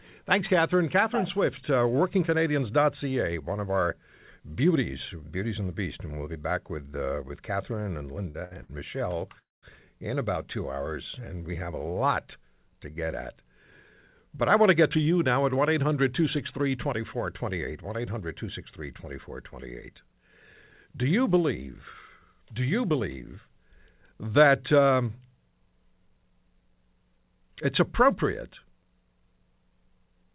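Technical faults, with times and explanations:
8.30–8.36, 8.44–8.53 and 8.63–8.71 s: short stall from a late packet, three times. Each sound is held 40 to 67 ms too long, then resumes without loss, because the jitter buffer emptied.
9.39–9.65 s: call audio freeze. The last sound buzzes briefly, then drops to near silence for about 190 ms before resuming intact, likely from packets held up and an empty jitter buffer.
12.93–12.97 s: short stall from a late packet. A sound is stretched by about 26 ms while the receiver waits, then continues where it stopped.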